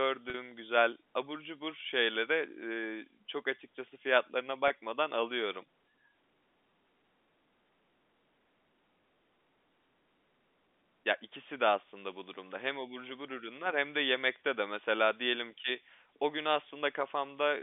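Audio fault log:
0.30–0.34 s and 4.68–4.70 s, packet loss with pitch repetition: audio drops out for 40 ms before "güzel abur cubur şeyleri" and 20 ms after "çok açıkçası fiyatlarına". The receiver fills each gap by repeating the last pitch period, producing a brief held, buzzy sound. The gaps fit two lost 20 ms packets and then one.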